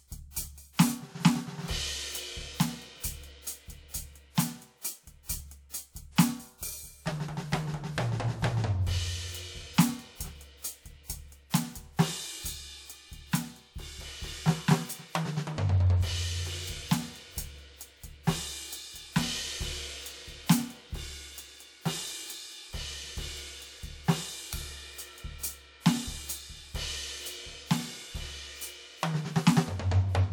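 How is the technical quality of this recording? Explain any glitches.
The music carries pre-echo at five attacks: 0.31 to 0.36 s, 0.73 to 0.79 s, 5.69 to 5.74 s, 6.58 to 6.63 s and 11.50 to 11.54 s. Each hit is preceded by a short hiss lasting 39 to 59 ms, blurring its onset. The transform codec spread noise meant for the loud attack back across the quiet start of its block.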